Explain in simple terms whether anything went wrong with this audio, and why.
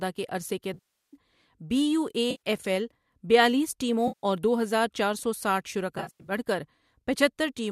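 Chunks of the audio went missing in transmission (AAC frame loss with concealment). The decoder patched each gap with smeared, noisy sound instead of clean silence, which sets it apart from a simple dropout. This happens after "کے عرصے کے" (0.74–1.16 s), at 2.31–2.40 s, between "ایل بیالیس" and "اور دو ہزار چار" (4.08–4.25 s), and in scattered bits after "ہزار چار سو سٹھ" (5.98–6.32 s).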